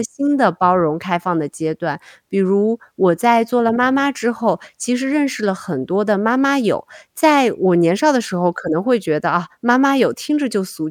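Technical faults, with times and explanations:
No technical faults can be heard anywhere in the clip. There is nothing to list with a time or an explanation.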